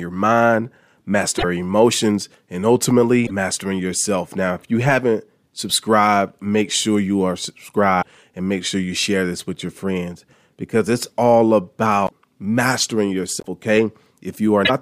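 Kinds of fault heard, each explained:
Broken MP3 bit reservoir: 40 to 70 ms glitches at 1.37, 3.25, 8.01, 12.06, 13.39 and 14.64 s, likely frames after a cut decoding borrowed bytes from the wrong frame.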